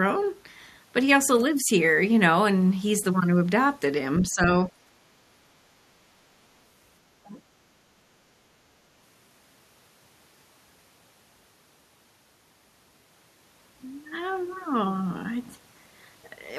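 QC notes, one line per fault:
4.31 to 7.37 s, speech suppressed in double talk. The speech dips sharply at 4.31 to 4.71 s, 5.98 to 6.07 s and 7.23 to 7.37 s, by roughly 10 to 25 dB. The likely cause is an echo canceller unable to separate the talker from the overlapping loudspeaker echo. It turned the talker down along with it.
4.85 to 4.93 s, background gated by the echo canceller. The room sound drops by about 10 dB for roughly 70 ms, then returns. The canceller clamped the microphone while the loudspeaker played, so the ambience briefly dips.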